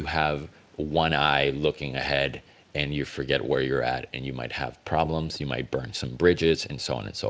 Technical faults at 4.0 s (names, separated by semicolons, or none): none